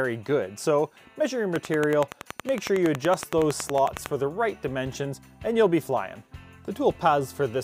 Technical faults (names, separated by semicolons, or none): train of clicks